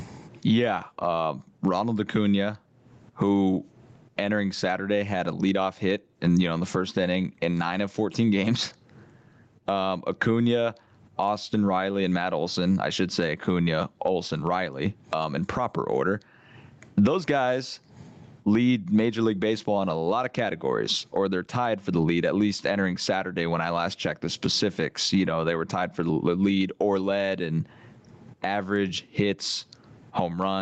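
Gain pumping runs through the whole speech clip. The level swing is large, around 25 dB, so loud and quiet passages sit close together and the delivery sounds squashed and breathing. The likely cause is input gain set far too high, with a fast limiter or compressor clamping down on each loud sound. The call path's Opus coding caps the top end at 8 kHz.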